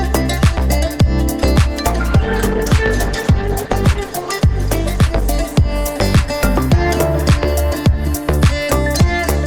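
A call bitrate drop runs from 1.91 to 8.39 s. The audio turns coarse and muffled, which fits roughly 96 kbps falling to 14 kbps, with the worst stretch lasting about 1.67 s.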